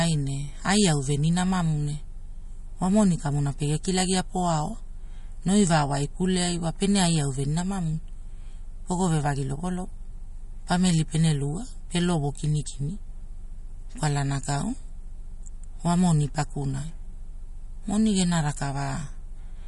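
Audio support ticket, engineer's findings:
Watery, swirly speech throughout, nothing above 11.2 kHz. Likely MP3 compression, fits about 46 kbps; encoder cuts treble, zeroes weak frequency lines.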